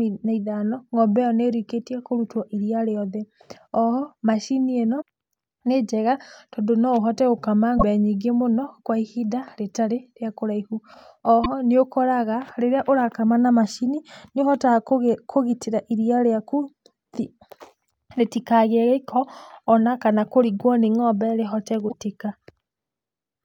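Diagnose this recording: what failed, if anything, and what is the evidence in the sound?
Codec stage: damaged data in a compressed stream. Brief glitches break the speech at 4.98–5.02 s, at 7.75–7.83 s after "tondũ no ũhote gũkama", at 11.44–11.46 s before "ho nĩũkoraga", and at 21.85–21.94 s after "nĩ ng'ombe rĩhote". Corrupted frames make the decoder misread them, lose sync and hunt for the next frame header.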